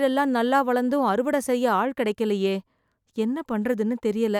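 No technical faults are audible.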